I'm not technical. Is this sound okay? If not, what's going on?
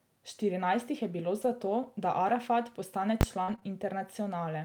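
No. At 3.21 s there is a single sharp bang lasting about 20 ms. This is invalid numbers at full scale: a calculation broke and briefly pinned the sound at an extreme value, far beyond the loudest parts of the speech.

Between "jih je bilo" and "to da" (1.41 to 1.47 s), and again at 3.48 to 3.54 s and 3.63 to 3.65 s, the speech turns briefly rough and noisy. Each is a lost packet rebuilt from error correction, where a cruder backup copy of the missing piece was played instead.

Around 3.43 to 3.50 s, 3.56 to 3.60 s and 3.60 to 3.63 s, the sound smears or wobbles for an instant. This is short concealed packet loss: audio arrived too late, so the receiver stretched the previous sound to cover the hole.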